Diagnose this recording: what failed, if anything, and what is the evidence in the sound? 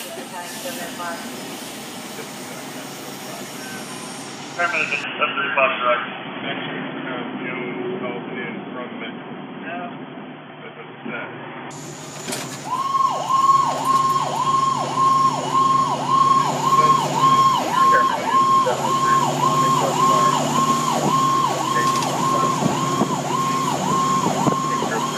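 The fault sits at the input stage, in device routing. From 5.04 s to 11.71 s the sound turns dull and boxy. Nothing reaches above 3.4 kHz in that stretch. The level also shifts, by around 5 dB, and a new background noise appears, well below the signal. There is no gap at either switch. The change is instant both ways. This is likely an input switched to a poorer device, whose narrower band, own tone and own noise floor replace the original microphone's.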